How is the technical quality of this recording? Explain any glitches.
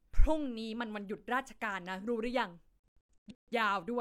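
The recording has one clear glitch, a digital broadcast dropout from 2.80 to 3.52 s. The receiver lost valid frames and muted until clean ones returned, so the speech breaks into several short silent holes. Gaps total about 427 ms, the longest 128 ms, and that audio is simply gone.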